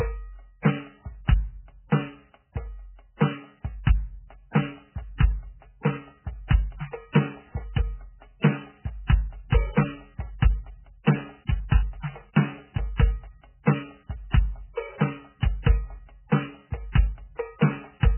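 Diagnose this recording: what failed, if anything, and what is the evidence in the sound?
The stage at fault is the codec. Throughout this music the treble stops dead at 3.1 kHz, and what remains sounds watery and swirly, with heavy damage, which fits a very low bitrate of around 8 kbps. The likely cause is MP3 compression: starved of bits, the encoder cuts everything above a fixed frequency and drops weak spectral lines that flicker on and off between frames. That flicker is what separates it from a plain low-pass filter, which would sound dull but steady.

The same codec also produces pre-echo, audible twice: a brief hiss runs ahead of the attacks at 8.40 s, lasting 36 ms, and at 15.63 s, lasting 35 ms. Each attack fell late in a transform block, so quantisation noise sized for the loud onset was spread back across the quiet moment before it, softening the hit. Unlike a click or dropout, the hiss comes before the attack rather than interrupting it.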